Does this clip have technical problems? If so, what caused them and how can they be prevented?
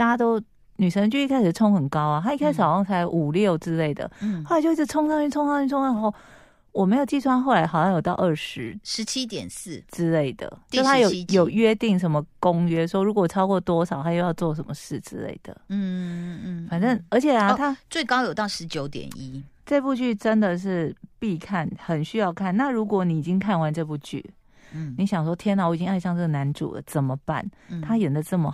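No, no technical faults here.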